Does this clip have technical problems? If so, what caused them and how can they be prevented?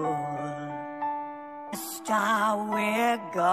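Yes. At 1.72 s a brief glitch comes from damaged data in a compressed stream: corrupted bytes make the decoder misread a frame and resync at the next header. Checksum-verified transfers prevent it.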